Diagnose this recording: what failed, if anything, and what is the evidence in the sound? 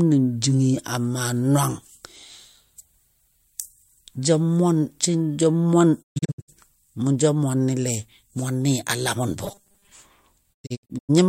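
Digital broadcast dropout, at the reception stage: the speech fades out over about 20 ms into scattered holes at 6.01–6.50 s and 10.52–11.11 s, roughly 320 ms gone each time, as the receiver muted bad frames.

Robotic sound from repeated short buffers at 9.45–9.92 s: a rigid 200 Hz metallic buzz, which fits a 5 ms chunk being looped over most of that stretch, likely a starved driver buffer.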